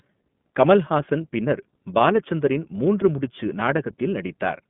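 Speech, and the whole thing has been through the iLBC codec, the narrowband VoIP kind. The line band sits at roughly 150 Hz to 3.5 kHz, so everything sounds boxed in. The plainly rough, slightly synthetic grain fits 30 ms frames coded independently, with the rate pointing to the 13.33 kbps mode.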